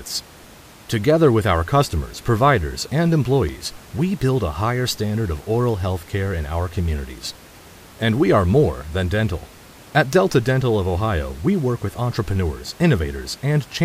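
No technical faults are present in the speech; the only background is room noise from the recording space, sitting about 24 dB below the voice.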